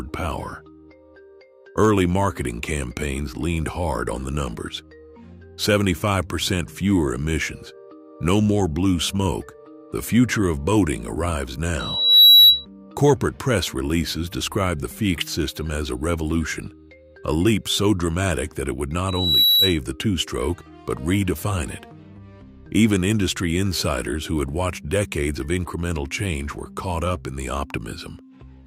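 At 11.79 s there's a loudspeaker feedback squeal: a tone at 3.9 kHz swells up over a bit under half a second and rings well above the rest of the sound until it stops at 12.65 s. The mic was clearly hearing its own speaker, and at that frequency the loop gain tipped past one. It happens again from 19.08 to 19.78 s, same pitch, same quick build, but this time it only sits a little above the sound.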